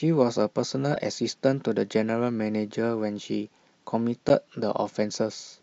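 At 0.91 to 0.96 s there's a corrupt frame decoded, a quick squeaky blip lasting about 50 ms. Some bits in the compressed stream got flipped, and the decoder played the damaged data anyway. Misread gains and codes threw energy into frequencies that don't belong to the speech around it. It spans what sounds like a couple of frames, and the stray energy peaks somewhere around -20 dBFS, so it comes across as a brief chirp.

Then at 4.29 s there's a block of digital silence, a 10 ms stretch where the sound just drops out. The likely culprit is the output buffer not getting filled in time, so the playback ran out of real audio for a moment. The cut to silence and the return both happen with no fade. At this length it comes across as a single sharp tick rather than an audible gap.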